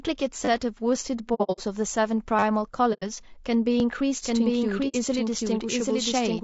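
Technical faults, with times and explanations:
Throughout: low-delay AAC compression. The speech sounds rough and grainy. Noise fills the gaps between the pitch harmonics, and the top band is thin and synthetic. This is likely AAC-ELD at about 32 kbps, the low-delay AAC used for video calls. Its short frames resolve harmonics poorly and cost extra bits. On a spectrogram the harmonic stripes look smeared and there is a noise floor between them. The upper band looks blocky or patchy rather than detailed.
0.45–0.48 s, 2.39–2.43 s and 3.80 s: repeated buffer. The same 10 ms slice plays again back to back, three extra times in the first event, four in the second and once in the third. It is heard as a short buzzy stutter, because new audio did not arrive in time and the last buffer was replayed. On a waveform the segment repeats identically with hard joins. A spectrogram shows a brief vertical comb of lines at a 10 ms spacing.
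1.34–1.60 s, 2.93–3.04 s and 4.88–4.96 s: AAC frame loss with muting. Lost frames were zeroed by the decoder, so the sound fades out and back in as soft-edged holes. The first event scatters 180 ms of gaps over about 240 ms, with the longest run near 70 ms. The second loses 90 ms and the third 60 ms. A waveform shows tapered dips to silence, and a spectrogram shows blank full-band columns with gently feathered edges.
4.24 s to the end: doubled audio track. From here a second copy of the speech, about equal in level, runs roughly 0.7 s behind the original. Everything is heard twice, overlapping, with no decay or room colour. This is likely a second capture through a slower path or two out-of-step copies in an edit. The copy starts abruptly. A spectrogram shows the same full-band patterns repeated at a fixed offset of about 0.7 s.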